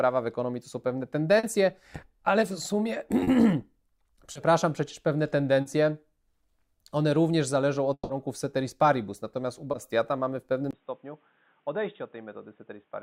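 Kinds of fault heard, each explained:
Short concealed packet loss, at 1.39, 3.23, 4.33, 5.61 and 9.71 s: Small pieces of the stream, 40 ms at the first, second and fourth points and 20 ms at the third and fifth, arrived too late to decode. The receiver covered each hole by extending the sound just before it and then blending back into the real signal. Each one is heard as a brief smear or wobble.
Long network dropout, from 7.93 to 8.11 s: About 160 ms of audio is missing. The last sound before the gap is stretched out and fades, then about 50 ms of silence follows before the sound resumes further along. The part that fell in the gap is never heard. The likely cause is the connection delivering nothing for that stretch, with the receiver filling what it could before going quiet.
Input switched to a poorer device, from 10.71 s to the end: After a 20 ms silence the sound turns dull and boxy. 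Nothing above 3.8 kHz gets through, the level drops by about 10 dB, and a new background noise sits about 40 dB below the signal. The abrupt change in bandwidth, tone and noise floor points to the recording likely changing over to a narrower-band microphone or a headset's call profile at that moment.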